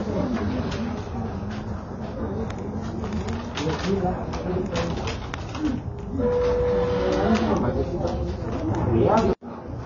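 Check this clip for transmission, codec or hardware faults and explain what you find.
There is one codec fault, present for the whole clip. The sound is dull and smeared, with nothing above about 7.3 kHz. Sustained parts have a warbling, fizzy texture. This points to AAC compression, likely AAC-LC at a low bitrate, around 24 kbps. To save bits, the encoder dropped the top band and coarsely quantised the rest.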